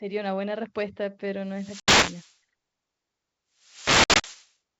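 Speech with two wireless microphone noise hits, at 1.45 to 2.39 s and 3.57 to 4.54 s. As the FM signal fades, receiver noise swells into a swish of static that shows as broadband grey haze on a spectrogram. Inside each hit, packet loss on an ADPCM call cuts hard-edged silent gaps into the waveform. The first, 1.80 to 1.92 s, drops about 80 ms, roughly four packets. The second, 4.04 to 4.27 s, loses about 120 ms scattered over 200 ms, longest run 60 ms. After each gap the desynchronised decoder brings the speech back slightly distorted until it settles. The G.722 wideband path, at a bitrate consistent with 64 kbit/s, keeps energy up to 7 kHz.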